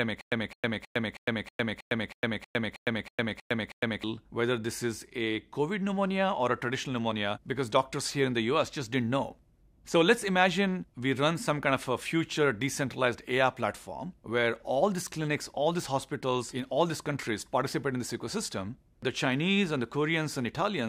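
Stutter with silent gaps, already under way when the clip opens and lasting until 4.04 s. The same 212 ms burst of sound plays, drops into about 107 ms of digital silence, then returns, repeating twelve times at an even 319 ms period. The pattern is likely a stalled player or stream that replays its last fragment at each retry before running empty, and whatever audio belonged in those four seconds is lost.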